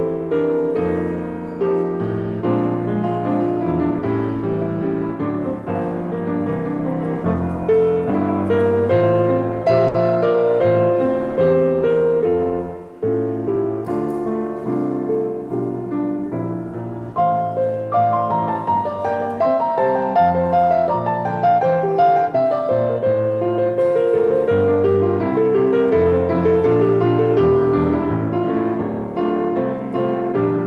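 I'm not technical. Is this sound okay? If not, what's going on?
No. Around 9.9 seconds there's a short stall from a late packet: a piece of audio arrived late, so the receiver held the last sound for about 70 ms while it waited. Nothing is lost, but that moment briefly drags or buzzes.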